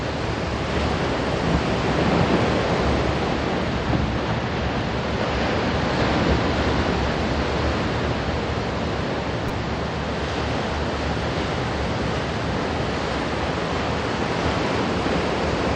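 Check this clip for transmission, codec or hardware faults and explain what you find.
One fault turns up, a repeated buffer at 9.49 s. Fresh audio did not reach the output in time. The device played its last block again instead, three extra times. The same tiny slice therefore sounds four times in a row, with a hard join at each repeat. Each slice is very short, which fits a 5 ms buffer. So the stutter is heard as a brief buzzy click. Practically no audio is lost.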